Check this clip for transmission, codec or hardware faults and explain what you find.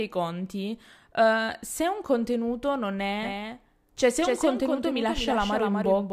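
From 3.23 s to the end, the speech suddenly acquires a second, full-band copy of itself trailing roughly 300 ms behind and a few decibels quieter, so every syllable is followed by a flat, distinct repeat. This is a doubled audio track. The copy starts abruptly and has no decay or room colouring, unlike a natural echo. It is likely caused by the signal being captured a second time through a slower path, or by an edit leaving two misaligned copies.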